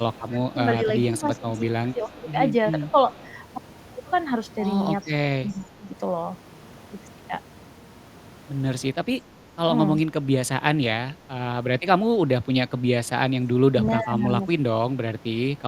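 From 0.0 to 2.28 s the speech is suppressed in double talk, with level dips of about 15 dB across roughly a second. The likely cause is an echo canceller that cannot tell the local talker from loudspeaker echo and attenuates both. Within that span, an echo leak appears at 0.14 to 0.22 s and again at 1.38 to 2.31 s: a faint copy of the speech, about 30 dB down, trailing by 384 ms. It is likely residual loudspeaker pickup that the far end's canceller failed to remove. The same echo returns at 2.88 to 3.32 s and 5.01 to 5.62 s, closer to 25 dB down. Further double-talk suppression follows at 5.47 to 5.91 s and 8.94 to 9.61 s, with dips of about 15 dB, and at 13.68 to 14.44 s, where the speech drops about 20 dB.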